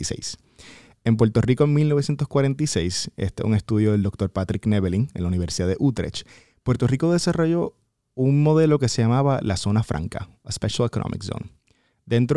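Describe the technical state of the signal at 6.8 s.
At 6.8 s the signal is intact, with no dropout, clipping, distortion or other audible fault at that point.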